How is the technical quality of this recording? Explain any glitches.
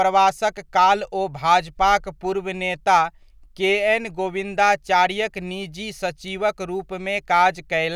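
The technical quality of this recording is good, with no glitches to explain.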